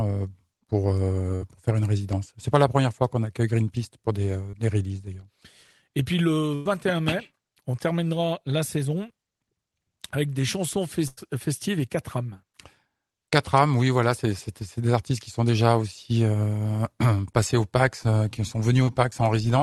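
At 1.35 to 1.43 s, just before "pour faire une résidence", a burst of packet loss drops about 60 ms of audio. The receiver bridges it by extending the last sound for roughly 54 ms while fading it, producing a held buzz or decaying hiss before playback resumes further on, with that stretch gone. The same fault recurs at 6.55 to 6.67 s and at 11.07 to 11.19 s, just after "avec des chansons". Each time about 100 ms is lost and the fade-out fill runs for the whole gap, so those two dropouts are longer.

At 4.51 to 4.55 s a short concealed packet loss removes about 20 ms. The decoder extrapolates from the preceding sound and cross-fades back into the real signal, leaving a brief smear or wobble. A second instance at 18.83 to 18.89 s, right after "qui sont", covers about 40 ms and is likewise a brief smear or wobble, with any short consonant there at risk of vanishing. All of this sits within an Opus call path whose top end stops near 12 kHz, consistent with a bitrate around 24 kbps.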